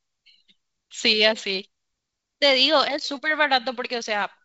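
No faults can be heard in this speech recording. It carries the wideband telephone sound of G.722 coding, with the speech reaching up to around 7 kHz and at most a faint trace of the coding in the upper band, which fits the codec running at its full 64 kbit/s rate.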